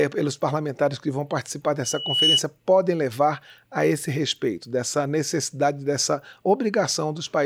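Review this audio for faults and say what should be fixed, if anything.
A microphone picked up its own loudspeaker, and the loop gain at 2.9 kHz climbed past one, producing loudspeaker feedback squeal from 1.83 to 2.41 s. A pure tone swells over roughly 0.4 s until it sits about 5 dB above the rest of the sound. Preventing it means lowering the gain, moving the microphone away from or behind the loudspeaker, or notching out 2.9 kHz.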